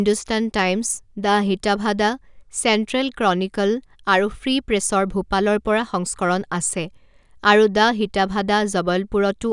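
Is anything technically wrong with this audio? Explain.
No, there are no technical faults to report in this speech recording.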